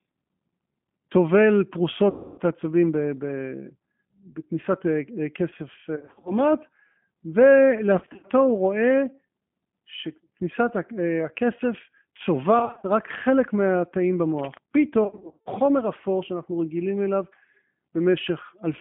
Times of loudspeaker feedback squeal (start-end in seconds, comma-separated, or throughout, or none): none